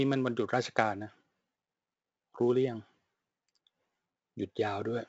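Throughout, heavy 4-bit ADPCM compression's coarse adaptive steps leave gritty hiss tracking the speech; the spectrogram shows level-following broadband noise and nothing above 7.8 kHz.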